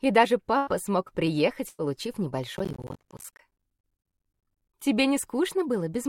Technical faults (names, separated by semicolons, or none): burst of packet loss; processor overload crackle